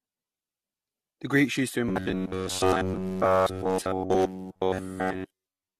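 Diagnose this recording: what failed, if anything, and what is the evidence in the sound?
Codec stage: generation loss throughout, likely from about seven AAC passes. Swirl, smearing and hollowness exceed a single 64 kbit/s encode, with nothing above 14.3 kHz.

Driver or buffer stage: robotic sound from repeated short buffers, from 1.89 s after "used to" to the end. A rigid 93.8 Hz buzz replaces nearly all the audio, likely from repeating a roughly 10.7 ms buffer. Unlike codec damage, it imposes a fixed pitch.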